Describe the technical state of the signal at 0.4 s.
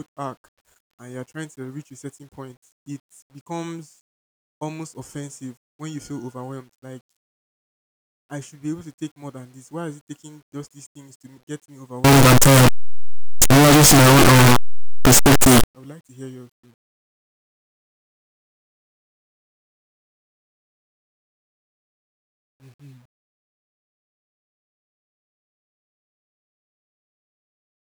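At 0.4 s the speech signal is intact, with no fault present at that moment.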